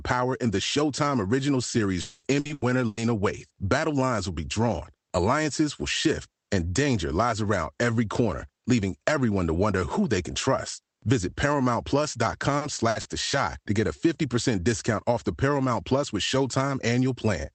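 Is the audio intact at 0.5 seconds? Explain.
Yes, the speech at 0.5 s is intact, with no dropout, click or distortion at that point beyond the ordinary coding character of the call path.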